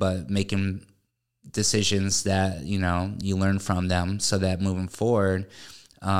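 No technical faults detected anywhere in the speech recording.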